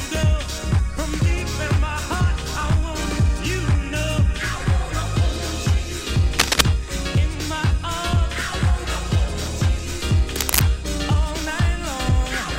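Cable scratch noise at 6.39–6.63 s and 10.32–10.62 s: brief rustly, scratchy bursts, the first a bit louder than the sound, the second level with it, likely from a worn cable or connector shifting.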